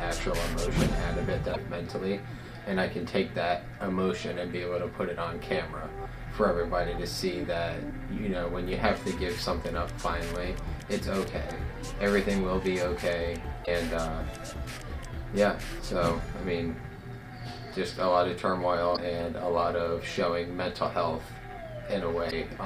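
Damaged data in a compressed stream appears at 1.50, 13.62, 18.93 and 22.27 s, each lasting about 55 ms. Corrupted bytes make the decoder misread those frames and lose sync until it finds the next frame header, leaving a brief chirp, squawk, click or short hole.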